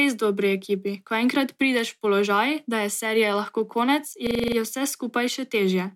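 In this speech clip, right after "je serije lahko konec", from 4.27 to 4.57 s, a 42.67 ms fragment repeats exactly seven times as a rapid rattling stutter at about 23.4 Hz before "je vse" resumes. This is a system hang loop: the system stalled while the audio hardware kept replaying the same ring buffer, which fits a 2048-sample buffer. Essentially no audio goes missing.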